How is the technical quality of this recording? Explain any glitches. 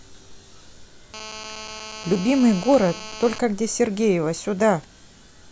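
The recording has one clear glitch. From 1.14 to 3.39 s, GSM phone buzz: a nearby handset's 217 Hz call bursts are rectified into a harsh, steady rasp about 16 dB below the speech, far edgier than smooth mains hum.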